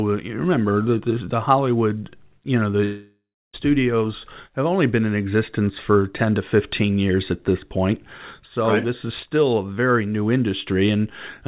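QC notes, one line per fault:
2.84–3.55 s, long network dropout: right after "you know" the sound smears into a fading buzz, ending in about 0.31 s of near-silence. Playback resumes with roughly 0.7 s missing. Likely lost packets, with concealment extending the last audio over the 4 kHz-limited call path.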